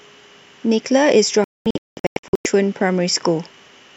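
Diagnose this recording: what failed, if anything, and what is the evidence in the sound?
The speech breaks up between 1.44 and 2.46 s. Over that stretch of about a second it falls to silence in a series of short holes, the longest about 216 ms, and in total roughly 0.79 s of sound is missing before it returns. This is a digital broadcast dropout at the transmission and reception stage. The receiver stopped getting valid frames and muted until good ones arrived. The missing total fits about 33 lost frames of 24 ms each, and that audio is gone.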